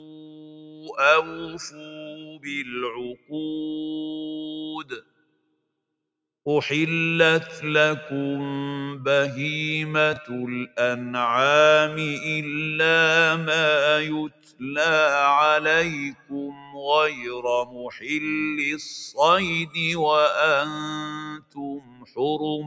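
A speech-tuned noise suppressor was left running on this non-speech audio. It treats sustained material as noise, so levels swing by about 15 dB, and held sounds pump and thin. The sound cut by the noise suppressor is longest from 0.0 to 5.59 s, sinking by about 17 dB. At 10.13 to 10.17 s there are chunks out of order: a 10 ms chunk lands three chunks late, giving a brief jumbled blip. The suppressor cuts in again at 14.28 to 14.62 s (about 17 dB), 16.12 to 17.26 s (about 16 dB), 17.64 to 18.09 s (about 12 dB) and 21.23 to 22.18 s (about 17 dB), each time pulling down steady or decaying sound while sharper onsets get through.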